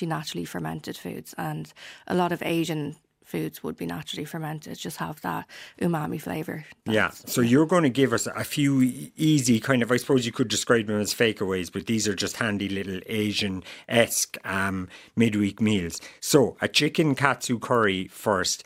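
No technical faults can be heard anywhere in this speech recording. There is nothing to place on the timeline and nothing to explain.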